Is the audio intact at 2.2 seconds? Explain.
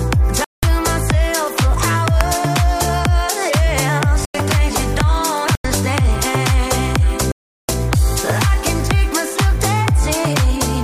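No, there's a corrupt FLAC frame right at 2.21 s. Some bits in the encoded data got flipped and the decoder didn't catch it with the checksum, so its prediction ran on wrong values until the next intact frame took over. What you hear is a very short, harsh burst, only a few milliseconds long, peaking at about -2 dBFS, so it's nearly full scale. It's an abrupt crack, and the audio comes back clean straight after.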